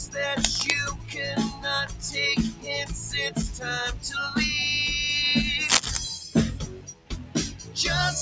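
A speech-oriented noise suppressor runs across the whole clip, treating sustained sounds and ambience as noise and swinging the level by about 10 dB, so the sound pumps and thins. It audibly cuts sustained material at 0.92–1.17 s, 1.5–1.65 s, 1.87–2.1 s, 2.5–2.68 s and 3.3–3.66 s, with dips of about 9 to 11 dB. The longest cut, at 6.62–7.77 s, reaches about 12 dB, pulling held tones and tails down while attacks come through. The call microphone path's band limit leaves nothing above 8 kHz.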